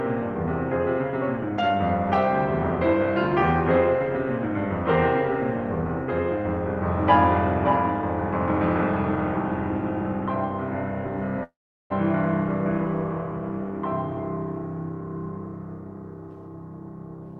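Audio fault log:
11.43–11.92 s, long network dropout: the music stops arriving and the last sound is stretched into a fading buzz. About 380 ms of near-silence follows, and the music resumes with roughly 0.4 s missing, likely from a long gap in packet delivery.
13.22–14.23 s, jitter buffer speed-up: the music plays about 6% fast at unchanged pitch, so the tempo briefly rushes. The receiver is trimming short pitch-period slices, around 70 ms in total, to drain excess buffered audio.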